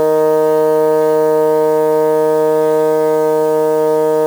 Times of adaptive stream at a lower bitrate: none

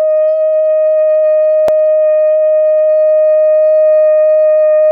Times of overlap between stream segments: 1.68

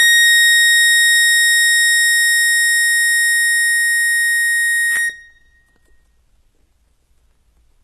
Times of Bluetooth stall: none

